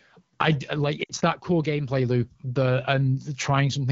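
Between 1.04 and 1.12 s, right after "I like", radio errors corrupted a short run of AMR wideband speech frames. The decoder rejected them and filled the gap by reusing its last good pitch and vocal tract settings at falling gain. About 60 ms went missing, which fits three consecutive frames. These lost AMR speech frames sound like a brief smeared, fading stretch that sinks quickly toward silence before the voice returns, momentarily weak, on "that core gameplay loop".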